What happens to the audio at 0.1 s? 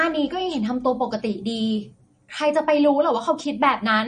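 At 0.1 s the speech is already passing through what is likely MP3 compression at a bitrate that points to roughly 40 kbps, affecting the whole clip. Short of bits, the encoder removes everything above 9.6 kHz and drops weak frequency lines frame by frame, so the speech sounds dull, watery and swirly, with metallic s sounds.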